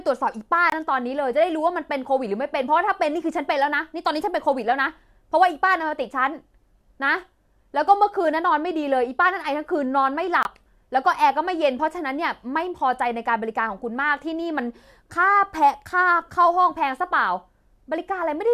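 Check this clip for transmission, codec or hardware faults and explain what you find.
Two short dropouts of the same kind are audible in this speech clip.

Corrupt frame muted, at 0.70–0.74 s and again at 10.43–10.47 s: damaged bits in the compressed stream made the decoder reject the affected frames, and the player substituted silence. Each gap cuts in abruptly, lasts about 40 ms (which fits two consecutive frames), and leaves the timing intact.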